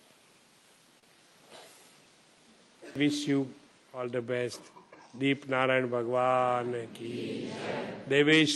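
Right around 0.99 s there's a short stall from a late packet, lasting until about 1.18 s. A packet turned up late, the jitter buffer ran dry, and the receiver held the last bit of sound for roughly 32 ms until the data showed up, then carried on where it left off. Nothing goes missing, but that moment drags a little, with a faint buzzy smear, and everything after it sits about 32 ms later.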